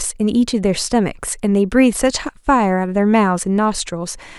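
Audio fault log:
No faults found in the speech on this pass; nothing to log.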